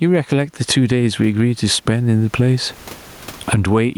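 Gain pumping is present throughout the speech. Room noise sits about 43 dB below the speech, and the gain swings by around 20 dB. The likely cause is input gain set too high, with a fast limiter clamping each peak.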